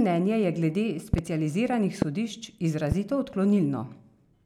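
Loud pops hit right after "je glede" at 1.14–1.21 s (a double), then singly at 2.02–2.04 and 2.92–2.94 s, jumping well above the speech, which carries on underneath, likely from voltage spikes like a switch or connector glitch.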